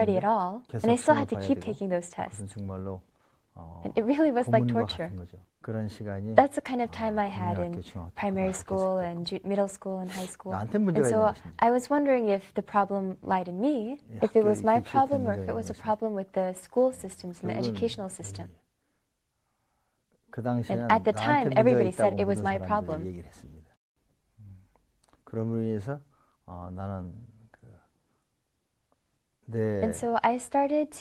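No technical faults are audible.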